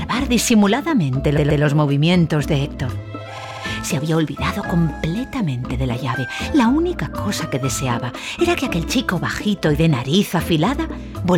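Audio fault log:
1.36–1.62 s, repeated frames: a 128 ms block of compressed audio plays three times in a row, which fits a run of about six frames being sent again, adding 256 ms. On a waveform the same shape appears three times.
3.37–3.63 s, repeated frames: a shorter 64 ms block loops five times, pointing to roughly three frames repeated, again adding 256 ms. The faster repeat rate gives a quicker stutter, restarting about every 64 ms. On a waveform it appears as a tightly tiled identical pattern.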